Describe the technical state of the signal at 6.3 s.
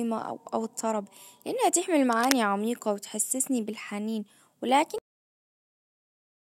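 At 6.3 s the signal is digital silence, part of a cut-off end running from 4.98 s to the end of the clip. The final buffers were never written, so the speech stops mid-sound with no decay. Unlike a dropout, the sound never returns.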